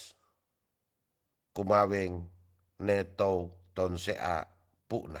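Opus voice compression runs through the whole speech clip. A linear-prediction core codes the lower band, with a thin transform layer above 8 kHz. Unlike a plain low-pass, the top persists to about 20.2 kHz, yet voicing sounds hoarse and slightly robotic, fitting roughly 16 kbps.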